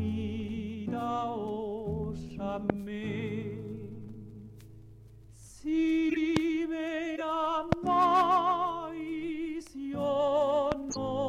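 A loud pop hits at 2.70 to 2.72 s, about 20 dB above the sound. It is a single sharp click laid on top, and the audio continues beneath it. A sudden voltage step, likely from a switch or static, would cause this.

At 6.09 to 6.17 s a corrupt frame decoded gives a short burst of squeaky noise near -20 dBFS. The span suggests roughly three damaged compressed frames played with wrong gains and misplaced frequency energy.

Another pop follows at 6.37 to 6.39 s, about 20 dB up.

A second corrupted-frame blip, quieter at around -25 dBFS, sits at 7.16 to 7.21 s, covering a couple of frames.

The loudest pop, about 25 dB above the sound, lands at 7.72 to 7.75 s. Another, about 20 dB up, comes at 10.72 to 10.74 s.

The last chirp of corrupted frames arrives at 10.91 to 10.97 s, near -20 dBFS.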